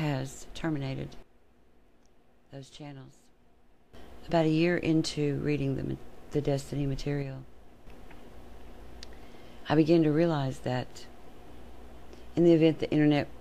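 At 1.23 s the level drops abruptly by about 12 dB until 3.94 s, and again by about 6 dB from 7.22 to 7.87 s, with the background noise falling and recovering in step with the sound. This sudden gain jump is likely a digital gain change applied between adjacent samples without any ramp.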